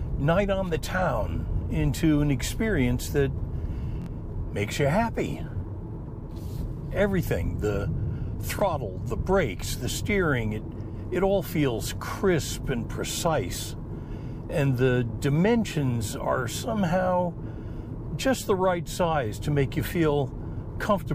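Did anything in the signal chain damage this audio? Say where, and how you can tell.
Yes, there is repeated buffer damage at the driver or buffer stage, at 4.02 to 4.06 s and 8.59 to 8.62 s. Each event is a brief stutter. A roughly 23 ms slice plays again with a hard join, three times in all at 4.02 s and twice at 8.59 s, which fits a 1024-sample buffer. New audio missed its deadline, so the device replayed its last block, losing about 50 ms and 20 ms of sound.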